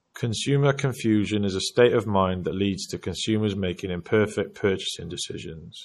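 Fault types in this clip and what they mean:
MP3 compression: the speech sounds plainly watery, likely from a low-bitrate encode near 40 kbps. A spectrogram shows flickering gaps.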